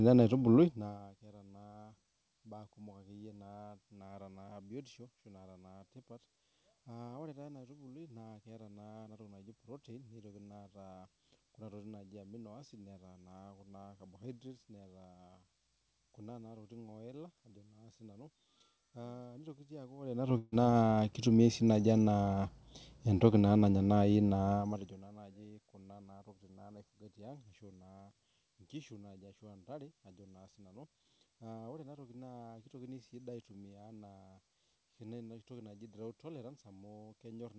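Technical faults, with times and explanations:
20.38–20.54 s, burst of packet loss: about 140 ms of speech did not arrive in time, so the receiver stretched the last sound and faded it into a held buzz or hiss, then 20 ms of silence, before speech resumes with 140 ms missing.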